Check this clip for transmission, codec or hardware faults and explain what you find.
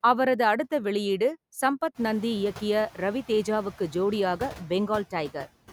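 One fault runs through the whole speech clip: noise suppressor artifacts. The suppressor pulls bands it judges to be steady noise down by about 13 dB. The noise dips between words and swells under them. The room noise rises by about 24 dB near 2 s, staying about 19 dB below the speech.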